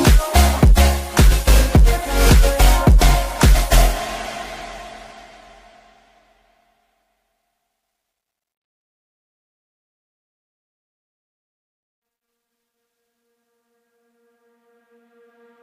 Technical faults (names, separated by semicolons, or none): none